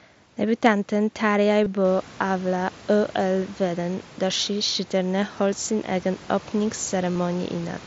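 Concealed Bluetooth headset packet loss occurs twice, at 1.64 to 1.66 s and 7.12 to 7.15 s. Lost packets were patched by repeating recent waveform, so each gap of about 23 and 30 ms sounds like a short buzzy hold with a slight warble as the speech resumes.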